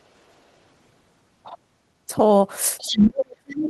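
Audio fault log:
2.78–2.97 s, other side's voice leaking through: a second voice sits about 10 dB under the main speech for roughly a fifth of a second. This likely comes from loudspeaker playback reaching the microphone and an echo canceller leaving a residual of that far-end signal.
2.81–3.69 s, speech suppressed in double talk: from just after the leak begins until the clip ends, the main speech is pulled down, at its deepest by roughly 35 dB. The likely cause is an echo canceller meeting simultaneous talk from both ends, failing to separate them, and attenuating everything.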